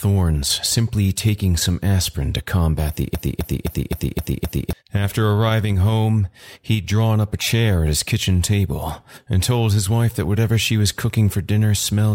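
A broken-record loop runs from 3.15 to 4.73 s: a 0.26 s fragment of the speech repeats six times, back to back. The likely cause is a player, encoder or stream that stalled and kept resending its last held fragment, so the speech due in that span is lost.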